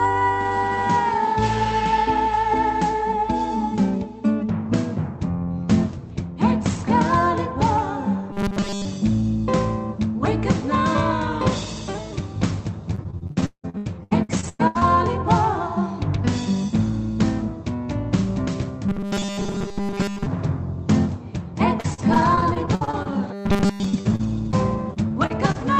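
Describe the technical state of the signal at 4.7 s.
At 4.7 s the signal is intact, with no dropout, glitch or other fault, only the steady character of the WebRTC call path it passes through.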